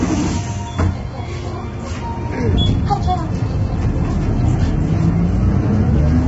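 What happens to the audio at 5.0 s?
At 5.0 s, as throughout the clip, the sound is rough and grainy, with noise filling the gaps between tonal components and nothing above about 7.8 kHz. This is likely heavy low-delay AAC compression, whose short frames resolve harmonics poorly and starve the upper band at a low bitrate, around 16 kbps.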